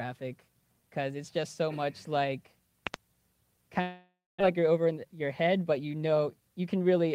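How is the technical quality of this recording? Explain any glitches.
The recording has three clear glitches, all after its first two and a half seconds.

From 2.87 to 2.96 s comes a loud pop, two sharp clicks about 20 dB above the sound, which carries on beneath them. A voltage spike, likely from a switch or static, was shaped by downstream circuitry. On the waveform these are two tall spikes; on a spectrogram, thin vertical broadband stripes.

From 3.81 to 4.42 s a long network dropout hits: 400 ms of audio never arrives. The receiver extends the last sound as a fading buzz, likely concealment after delayed packets, then about 210 ms of silence before the audio resumes. The spectrogram shows a smeared tail, then a blank gap.

From 4.58 to 6.28 s a jitter buffer speed-up follows as the buffer drains the backlog left by the dropout. Short pitch-period slices are cut repeatedly, removing roughly 150 ms, so the audio plays at 110% speed, hurried but unchanged in pitch. 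Spectrogram harmonics stay level while events sit closer together.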